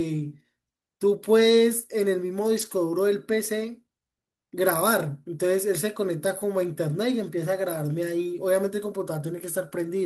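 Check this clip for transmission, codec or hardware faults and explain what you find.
One fault is present: a lost packet rebuilt from error correction, between 2.57 and 2.71 s. The speech continues without a gap, but a rougher, noisier stretch of about 80 ms appears, which fits four lost 20 ms packets. The decoder filled them from low-bitrate copies carried in the following packets. Unlike ordinary loss concealment, there is no silence, smeared repetition or fading tone. The content stays intact and is only coarser.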